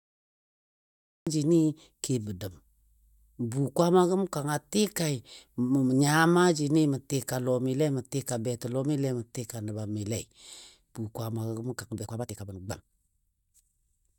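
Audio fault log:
0 to 1.27 s, cut-off start: digital silence runs until 1.27 s, where the speech begins abruptly in the middle of a sound. There is no natural attack or fade-in, because the recording or stream began late and the portion before the cut was never captured.
11.99 to 14.18 s, time-stretched section: the final stretch of speech suddenly runs about 1.69 times faster while its pitch stays unchanged, sounding rushed. This is likely software squeezing the audio to fit a length, dropping short pieces to keep the pitch.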